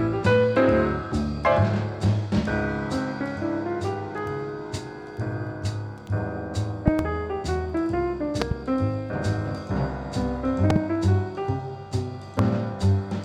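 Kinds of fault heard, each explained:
Loud pop: sharp thumps about 20 dB above the sound, in close pairs at 6.88–7.02, 8.42–8.54 and 10.70–10.78 s, single at 12.39 s (about 15 dB). The sound continues beneath rather than dropping out, pointing to a likely voltage step.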